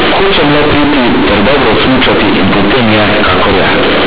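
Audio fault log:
throughout: companded audio read as linear. A-law bytes play as plain 8-bit samples without expansion, so each sign change swings about half the range, making quiet speech as loud as peaks: harsh buzz and loud noise in pauses. The waveform is a dense, even slab; the spectrogram shows dense noise up to 4 kHz.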